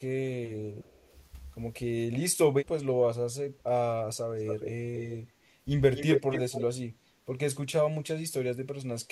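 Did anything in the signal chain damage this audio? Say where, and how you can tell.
Yes, both problems sit in the call processing, specifically speakerphone echo cancellation.

First, speech suppressed in double talk. The speech dips at 0.54–1.13 s (about 10 dB down at worst), again more heavily at 2.13–3.66 s (roughly 20 dB, about a second of it in total), and briefly at 7.98–8.32 s (about 15 dB). The likely cause is both sides talking at once. The canceller can't tell near speech from loudspeaker echo, so it turns everything down.

Second, echo leak. A delayed copy of the speech comes back at 0.84–1.18 s, about 300 ms late and very faint. It returns at 4.37–5.17 s with a 256 ms delay and sits roughly 10 dB down, then again at 5.95–6.64 s, same delay, about as loud as the speech itself. That's most likely a speakerphone whose canceller didn't fully remove what its mic picked up, so the residue got sent back.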